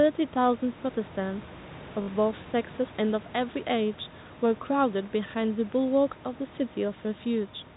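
From 2.02 to 2.08 s, packet loss with the last packet repeated fills a 60 ms gap. The receiver loops the last packet, which fits three 20 ms packets, producing a brief robotic stutter buzzing at 50 Hz. On a spectrogram, identical copied slices appear.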